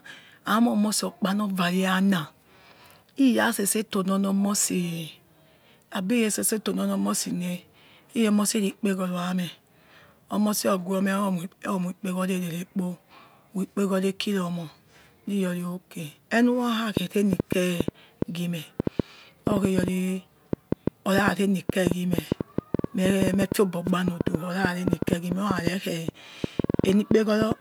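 Something in the signal chain, likely interference from nearby equipment or a faulty connection or power supply, began injecting short pulses at 16.97 s and kept it up until 27.53 s. The result is a train of clicks, around seventy of them, arriving at roughly 6.3 per second but at an uneven pace. Each click has much the same sharp shape and peaks around 20 dB above the speech, so the ticking sits clearly on top of the talking and carries on through the pauses.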